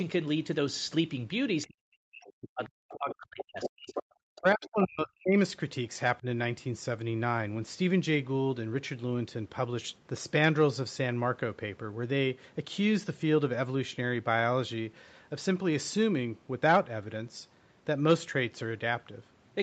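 From 1.67 to 3.97 s the talker's voice sinks by around 40 dB, about two seconds lost in all. This is speech suppressed in double talk: with both sides talking, the echo canceller likely mistook the talker for loudspeaker echo and turned everything down. The same cut returns from 4.37 to 5.37 s, and a shallow dip of about 10 dB follows at 6.2 s. Over that stretch the other side's voice leaks through: a faint scrap at 2.27 s, then from 2.65 to 4.03 s nearly as loud as the talker, and again faintly from 4.35 to 4.69 s, likely because the canceller left the loudspeaker playback in the microphone signal. The audio has no content above 8 kHz, as expected from the call path.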